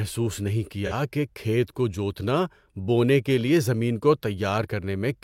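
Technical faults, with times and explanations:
0.86–0.93 s, AAC frame loss with concealment: a brief patch of about 43 ms where the speech turns smeared, noisy or phasey instead of cutting out, which fits a single lost AAC frame. The decoder covered the gap by reusing the last good spectrum, keeping the energy but losing the detail. A plain dropout would leave a hard silence or click. Here the gap is filled with blurred sound that has roughly the right level and tone.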